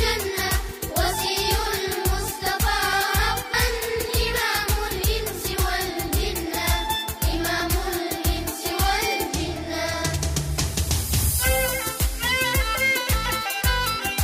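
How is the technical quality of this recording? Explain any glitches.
The recording has repeated dropouts from compressed frames skipped, at 0.69, 3.54, 4.91, 7.60 and 9.94 seconds. At each point, whole coded frames never reach the output. The audio jumps forward. The gaps at 0.69 and 3.54 s lose about a tenth of a second. The one at 4.91 s loses about a fifth. The last two lose a little less than a tenth. With 32 ms frames, these losses suggest a few frames per gap.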